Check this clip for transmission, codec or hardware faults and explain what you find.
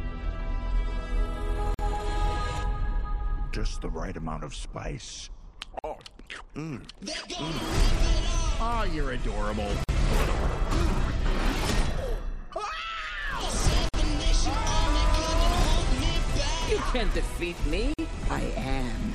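There is one fault, and it repeats: a gap at a join of encoded pieces. Brief silences of about 47 to 49 ms open at 1.74, 5.79, 9.84, 13.89 and 17.94 s, one every 4 s. The audio was encoded in separate pieces and joined untrimmed. Each piece's leading encoder delay and padded final frame stayed in. Each dropout has its edges smeared by the codec, and the sound then resumes exactly where it stopped.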